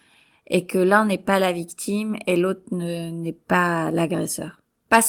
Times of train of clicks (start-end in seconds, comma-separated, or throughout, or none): none